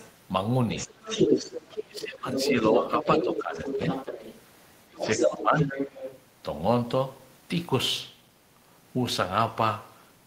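At 0.0 to 0.08 s a faint second voice sits about 25 dB under the speech. That is the other side's voice leaking through, most likely loudspeaker echo the canceller failed to remove. It returns from 0.76 to 2.04 s at roughly the talker's own level, then from 2.34 to 4.43 s and from 4.97 to 6.22 s at a few decibels below. On a spectrogram its harmonic stripes interleave with the talker's.

Where the two voices overlap, the talker's speech is suppressed in double talk, likely because the canceller, unable to separate near speech from echo, attenuated everything. It dips from 1.86 to 2.74 s (deepest about 20 dB), 2.97 to 3.8 s (about 10 dB), 4.89 to 5.08 s (about 15 dB) and 5.28 to 5.78 s (about 10 dB). The waveform envelope sags there.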